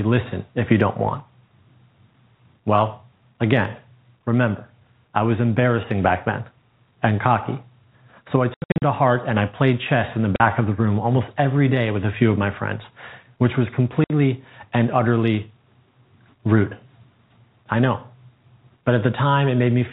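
Between 8.54 and 8.82 s, after "so I", the speech breaks into hard-edged silent gaps, about 220 ms missing in total with the longest run 80 ms, before "to heart and I". A 40 ms hole follows at 10.36 s, after "played chess in the", and a 60 ms hole at 14.04 s, after "my friends which was". This is packet loss filled with silence: lost packets were replaced by silence, and the gap lengths fit 20 ms packets. Under the narrowband G.711 telephone coding, nothing above 4 kHz passes.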